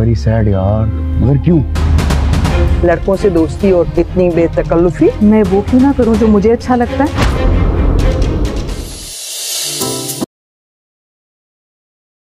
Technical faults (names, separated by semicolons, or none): audio dropout to silence